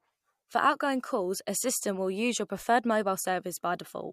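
At 1.76 s, a short run of output samples, about 0.73 ms, which fits a 32-sample block, was replaced with zeros, leaving a block of digital silence in the speech. The signal drops abruptly to zero and returns with no fade, so the gap is heard as a single tick.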